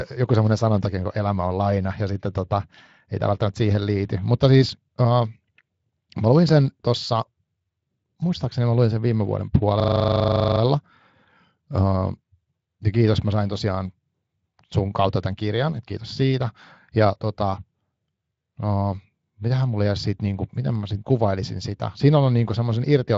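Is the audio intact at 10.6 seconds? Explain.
No. From 9.8 to 10.6 s, just after "luin sen viime vuoden", a system hang loop repeats one 40 ms buffer twenty times, producing a steady 25 Hz buzz.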